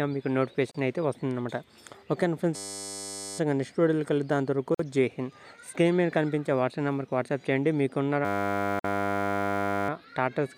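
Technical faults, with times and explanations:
0.71 to 0.75 s, 4.75 to 4.79 s and 8.79 to 8.84 s, gap at a join of encoded pieces: silences of about 32 ms, then 49 ms and 49 ms, open in continuous sound at a regular 4 s spacing. Each is where separately encoded pieces were butted together with encoder start delay and end padding left in. Unlike a dropout, the edges are softened by the codec, the spacing is strictly periodic, and the sound resumes exactly where it stopped.
2.56 to 3.38 s and 8.25 to 9.89 s, system hang loop: a single 10 ms stretch of audio repeats exactly, 82 times in the first run and 159 in the second. The result is a steady 100 Hz buzz rather than a stutter, because the hardware kept replaying one small ring buffer while the system froze. Unlike a gap or glitch, nothing is silent, and little or no audio is lost before playback picks up again.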